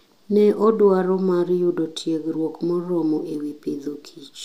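Nothing in the speech stood out as a technical fault on listening.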